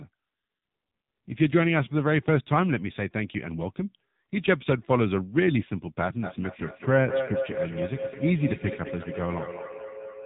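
Throughout, the speech carries heavy AMR narrowband mobile codec damage. Nothing passes above 3.8 kHz. The voice sounds buzzy and synthetic, which points to a low bitrate near 6.7 kbps.

From 6.23 s to the end, feedback echo between two devices appears. Each word returns about every fifth of a second, thinner and ringing, peaking at about 7 dB below the speech.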